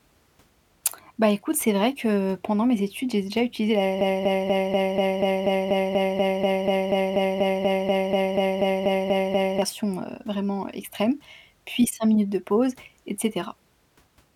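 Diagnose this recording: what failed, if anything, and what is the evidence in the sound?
A broken-record loop runs from 4.01 s to 9.62 s: one 0.24 s fragment of speech repeats 23 times back to back, identical and without decay, unlike an echo. The playback or stream buffer likely stalled and re-sent its last block, losing the intended audio.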